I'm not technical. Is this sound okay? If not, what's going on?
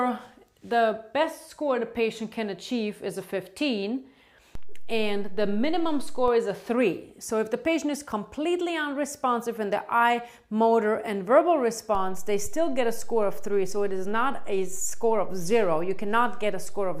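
No. There are two DC steps: the signal's resting level suddenly jumps off centre, as happens when a converter recalibrates. Each jump makes a low thump or click, at 4.55 s, again at 6.28 s when it jumps back, and at 11.95 s, where it stays shifted until the end.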